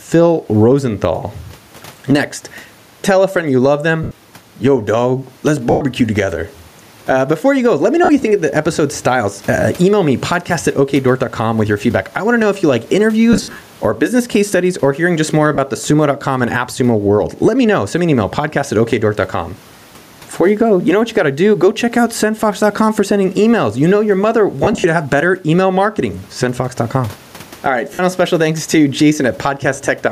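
Gain pumping runs through the whole recording. The level swings by roughly 10 dB, most likely from a fast limiter catching excessive input gain.

Lost LE Audio frames occur at 4.03 s (80 ms), 5.70 s (110 ms), 8.04 s (50 ms), 13.33 s (200 ms scattered over 280 ms, longest run about 70 ms), 15.55 s (30 ms), 24.64 s (120 ms scattered over 200 ms, longest run about 50 ms) and 27.94 s (50 ms). The LC3 decoder repeats the last spectrum with randomised phase, so speech smears into brief noisy blurs. The gap lengths fit 10 ms frames.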